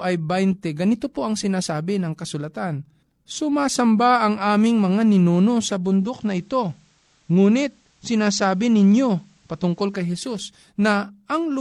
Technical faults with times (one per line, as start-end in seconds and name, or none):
5.75-10.30 digital radio blending to analogue